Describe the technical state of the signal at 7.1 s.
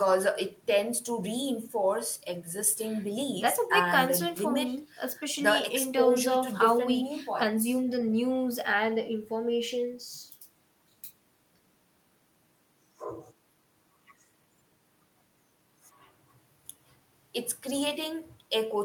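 At 7.1 s the speech signal is intact, with no audible dropout, clipping, distortion or other technical fault at that point.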